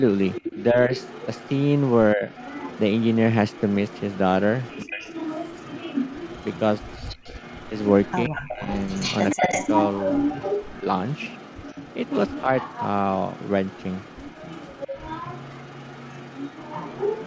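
From 0.28 s to the end, an echo leak trails the speech: a copy about 10 dB quieter arrives 136 ms late. This is likely an echo canceller on a loudspeaker end letting its microphone pickup through. The fixed delay makes it a separate repeat rather than room reverberation.

Speech suppressed in double talk dips the talker at 0.55–0.92, 2.14–2.27, 4.83–5.04, 8.28–8.62, 9.38–9.5 and 12.42–12.49 s. The drops range from slight to near-silent, deepest around 4.8 and 8.3 s, likely from the canceller ducking during overlap. Brief level drops, not dropouts, set them apart from packet loss.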